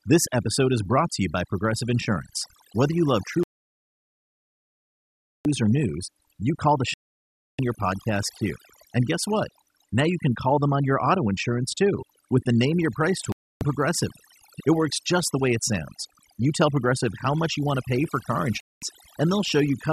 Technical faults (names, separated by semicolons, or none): overdone noise removal; digital broadcast dropout